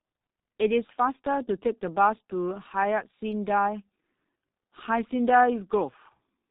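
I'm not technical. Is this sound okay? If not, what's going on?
No. The whole clip has passed through the G.723.1 codec, an old internet-phone format that squeezes speech very hard. It cuts away everything above 4 kHz, so the voice sounds muffled and dull. It also rebuilds speech from a rough model that updates slowly. That makes the voice hoarse and rough, and sounds like s, t and f lose their edges and blur together. The damage here is heavy, from start to finish.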